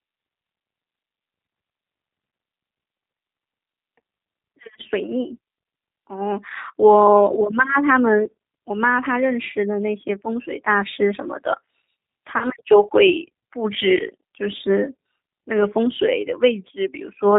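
G.729 codec coding runs through the whole of this speech clip, and the damage is plainly audible. The speech is rebuilt from a vocal tract filter, a pitch predictor and a few pulses per 10 ms frame, so it sounds slightly rough and synthetic, with nothing above 4 kHz. This fits an 8 kbit/s G.729A stream. VoIP packet loss concealed by the speech codec occurs from 12.38 to 12.48 s and again from 14.57 to 14.61 s. Each gap fits a single lost 20 ms packet. The decoder fills it by extrapolating from its last pitch and filter while lowering the gain, so the sound briefly smears into a buzzy tone or coloured noise that fades. Because each frame builds on the one before, the speech stays weak or distorted past the 20 ms itself, which is why the first event lasts about 100 ms.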